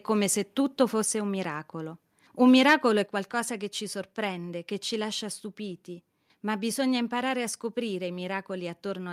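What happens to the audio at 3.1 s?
At 3.06 s the speech drops suddenly in level by about 5 dB, just before "qualcosa che ci sorprende". Voice and background fall together in one step. This is a microphone volume stepped down. The likely cause is call software lowering the microphone's input volume after judging it too loud.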